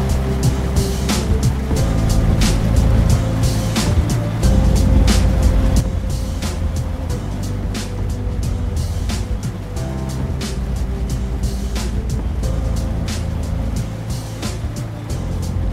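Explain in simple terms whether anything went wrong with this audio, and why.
At 5.8 seconds the whole recording suddenly gets noticeably quieter, and it stays at that lower level until the very end. The background hiss drops at the same instant as the main sound, which tells you the level itself was turned down in one step. This is a sudden gain jump. The likely cause is a volume setting being changed abruptly, with no gradual fade between the old level and the new one.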